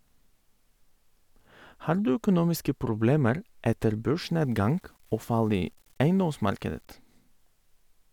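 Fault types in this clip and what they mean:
Low bit depth without dither: from 4.22 to 6.92 s the speech turns grainy and gritty, a roughness that rises and falls with the sound itself and is harshest in the quieter stretches, sitting only about 40 dB below the signal. The likely cause is the audio being rounded to very few bits with no dither, consistent with about 9 bits, so the quantisation error follows the waveform instead of forming a steady, neutral hiss.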